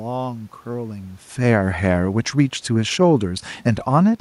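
From 1.32 to 4.16 s the speech sinks by about 4 dB along with the room noise. This is automatic gain falling, easing down on input it judged too loud or too noisy.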